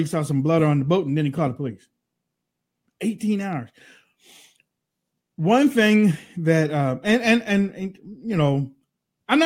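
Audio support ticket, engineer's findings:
No audible faults found on review of the speech recording; nothing for the playback or capture chain to fix here.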